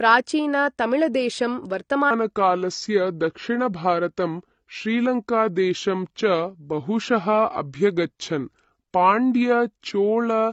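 The speech sounds dull and smeared from start to finish, with a watery, warbling edge on sustained sounds and sibilants. This is AAC compression, likely AAC-LC at a low bitrate, which fits around 32 kbps. With too few bits to spend, the encoder discards the high band and coarsely quantises what remains, so detail blurs and fine texture turns fizzy.

At 2.11 s the speech suddenly slows and drops in pitch, sounding deep and dragged through to the end of the clip. This is a section at the wrong speed, playing at 0.798 times its proper rate, which lowers the pitch by about four semitones. Speed and pitch fall together because the samples are being read out more slowly than they were captured, likely from the player or editor running this stretch on the wrong clock.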